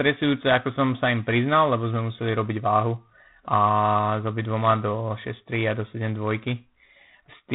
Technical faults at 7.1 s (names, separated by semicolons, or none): G.726 ADPCM